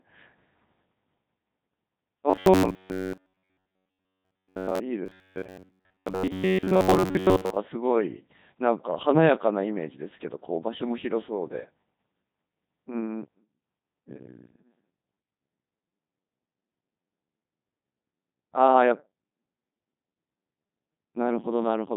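Speech passed through a Codec 2 vocoder, with robotic, buzzy synthesis, consistent with a rate of around 2.4 kbit/s. From 2.30 to 4.81 s and 5.06 to 7.57 s there is a robotic sound, likely from repeated short buffers: most of the audio is replaced by repeats, leaving a rigid 93.8 Hz buzz. On a spectrogram this appears as evenly spaced horizontal harmonics, and the waveform repeats about every 10.7 ms.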